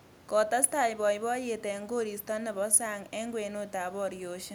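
No technical faults are audible.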